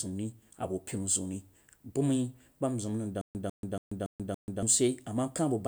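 From 3.21 to 4.63 s the speech falls into a stutter with silent gaps: a 147 ms fragment replays five times, each followed by 136 ms of digital silence, likely from a stalled stream retrying. The waveform shows identical blocks separated by flat silent gaps.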